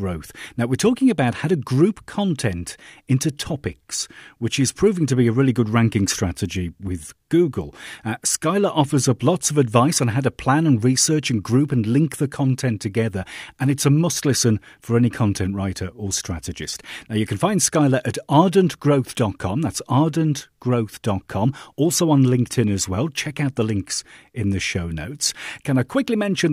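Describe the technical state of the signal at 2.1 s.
At 2.1 s the speech signal is intact, with no audible technical fault at that moment.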